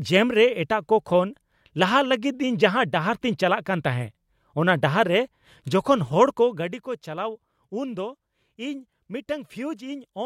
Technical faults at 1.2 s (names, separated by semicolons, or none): none